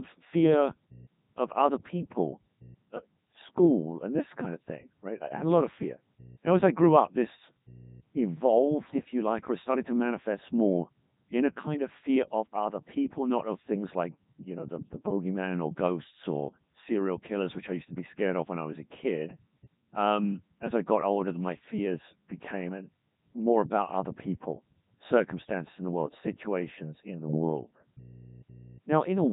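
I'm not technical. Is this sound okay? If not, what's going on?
No. From start to finish the speech sounds robotic and buzzy, with nothing above about 3.8 kHz. That is the Codec 2 vocoder, a digital-radio system that rebuilds the voice from a few described features instead of keeping the original sound.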